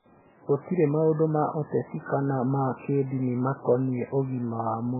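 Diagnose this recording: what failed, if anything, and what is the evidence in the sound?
Codec stage: the speech is cut off above 2.8 kHz throughout, with heavy watery swirling, which fits a very low bitrate near 8 kbps and likely MP3 compression.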